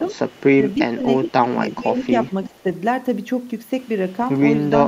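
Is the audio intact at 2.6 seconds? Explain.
No. At 2.6 s the sound falls inside a stretch of speech suppressed in double talk, running from 2.26 to 2.64 s. The level dips by about 10 dB at its deepest, with around a fifth of a second affected in total, so the speech sounds pulled down and patchy. The likely cause is an echo canceller that, with both sides talking at once, could not separate the near talker from loudspeaker echo and attenuated both.

Just before this moment, from 2.50 to 2.54 s, there is a brief echo leak: a very faint copy of the speech returns 338 ms after the original, far below the main signal. It is likely residual loudspeaker pickup that the far end's echo canceller failed to remove and sent back down the line. It ends before 2.6 s but sits inside the same suppressed stretch.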